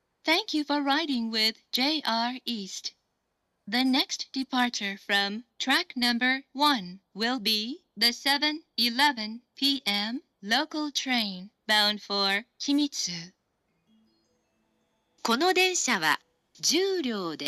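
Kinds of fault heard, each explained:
Nothing stands out here as a technical fault, so there's no kind to list or explain for this clip.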